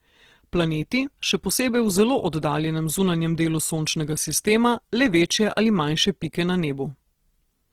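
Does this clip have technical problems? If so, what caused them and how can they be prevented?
Yes. The speech sounds rough, grainy and noisy from start to finish, though its bandwidth stays full. The likely cause is Opus compression in its music mode, filling starved bands with folded or noise content. This fits a low bitrate around 16 kbps. To prevent it, encode at a higher bitrate.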